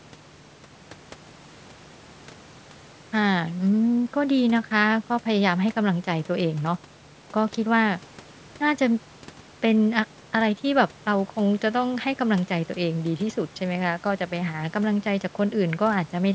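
No technical faults can be heard in this speech.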